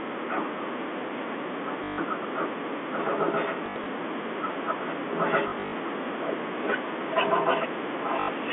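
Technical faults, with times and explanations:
1.84–1.98 s, 3.66–3.86 s, 5.48–5.72 s and 8.20–8.28 s, packet loss with last packet repeated: the receiver kept replaying the previous block of speech, whose length fits 20 ms packets. The first gap is an unbroken 140 ms and the last is 80 ms. The middle two are broken into runs of up to 60 ms. The repeats buzz at 50 Hz, giving a robotic stutter over the telephone-band sound. A spectrogram shows frozen, repeating harmonic patterns. The waveform shows identical repeated segments.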